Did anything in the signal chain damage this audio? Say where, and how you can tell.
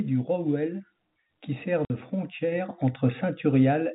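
Yes. At 1.02 s, driver-level microphone volume stepped up about 3 dB. Voice and background rise together, which a compressor acting on the voice alone wouldn't do.

At the network stage, packet loss filled with silence leaves a 50 ms hole at 1.85 s, which fits five 10 ms packets. Concealment would have smoothed the gap.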